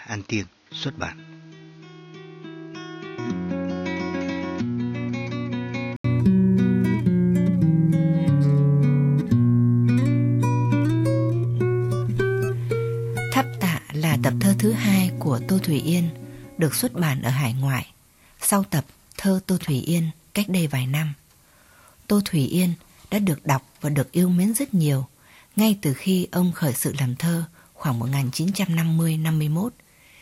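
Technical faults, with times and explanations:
0.00–6.04 s, input switched to a poorer device: the opening is dull and slightly quieter, with nothing above 6.7 kHz and a faint noise of its own. An 80 ms gap at 6.04 s comes before fuller sound, which fits a likely narrowband microphone or headset profile giving way.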